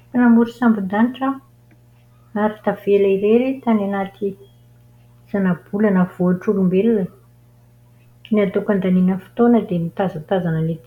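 A ground loop or a nearby transformer is coupling the 60 Hz power line into the signal path, so mains hum runs under the speech for the whole clip: a steady low tone with some low harmonics, sitting roughly 35 dB below the speech.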